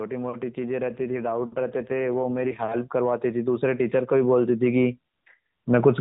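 From 0.05 s to 4.97 s the speech and its background swell together, rising by about 10 dB over nearly five seconds. This is automatic gain rising: the gain control judged the input too quiet and slowly turned its gain up.

Between 0.9 s and 2.72 s, partway through that swell, the speech turns rougher, buzzier and more synthetic, then recovers. The bandwidth stays put and nothing drops out. This is an AMR rate drop. The link forced the codec down from its 12.2 kbps mode, and the added coarseness fits a step down to around 5.9 kbps, with bits diverted to error protection. Throughout, the narrowband AMR-NB path passes nothing above 4 kHz.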